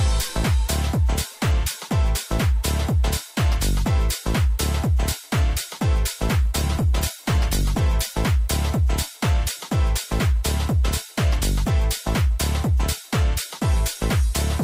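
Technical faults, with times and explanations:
6.43–8.23 s, call bitrate drop: the starved encoder codes coarsely, so the sound turns watery and muffled; on a spectrogram the upper band vanishes, which fits a fall to about 18 kbps.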